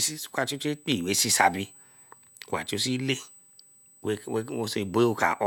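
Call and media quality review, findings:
USB whine throughout speech: fixed 8 kHz tone, roughly 30 dB below signal. USB microframe current leaking via power/ground. Spectrogram: steady horizontal line at 8 kHz.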